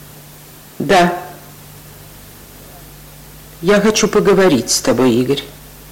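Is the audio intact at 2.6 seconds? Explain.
Yes, the audio is intact at 2.6 seconds, with no dropout, click, distortion or other fault at that point.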